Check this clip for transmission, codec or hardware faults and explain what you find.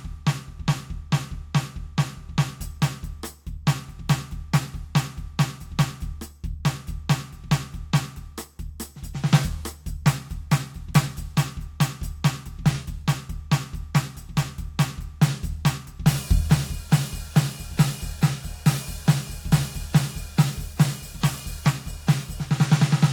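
No fault can be heard anywhere in this music recording. There is nothing to report for any part of it.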